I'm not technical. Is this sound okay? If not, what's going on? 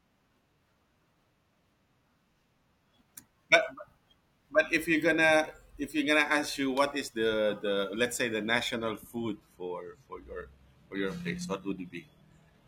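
No. An adaptive stream at a lower bitrate takes over at 8.72 s, right after "let's say the", and lasts to the end at 12.68 s. The stream switched to a cheaper, more heavily compressed version of the audio, likely because the connection slowed. The change is sudden, with no gap: the speech loses its crisp top end and takes on a processed quality for those final few seconds.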